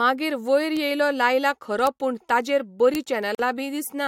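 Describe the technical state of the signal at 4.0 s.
At 4.0 s the speech signal is intact, with no audible fault at that moment.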